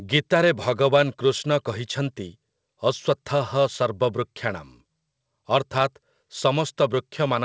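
No technical faults are audible.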